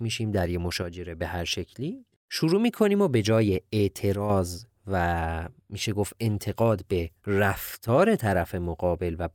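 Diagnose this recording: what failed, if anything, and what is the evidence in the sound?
One channel drops out at 0.82–1.21, 4.15–4.30 and 7.75–7.88 s. The speech falls abruptly by about 6 dB, leaving square-edged notches in the waveform, likely from intermittent analogue wiring.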